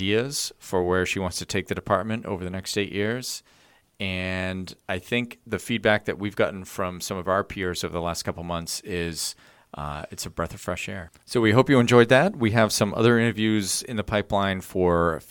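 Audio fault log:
No audible faults were heard in this speech clip.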